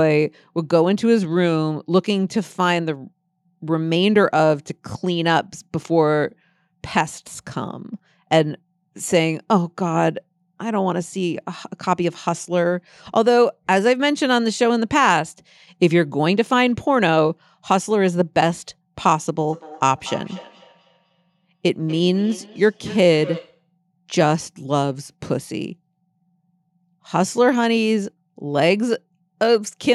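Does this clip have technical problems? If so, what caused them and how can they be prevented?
Yes. From 19.49 to 23.65 s there is feedback echo between two devices: the speech returns at a regular interval of about a fifth of a second, peaking at about -18 dB relative to the speech. It happens when one device's loudspeaker output reaches a second device's microphone in the same room, and each device's echo canceller removes only its own playback. Prevent it by muting all but one device or using headphones.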